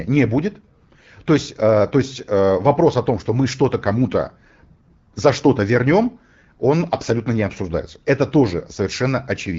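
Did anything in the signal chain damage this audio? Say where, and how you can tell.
No, nothing in the signal chain damaged this audio.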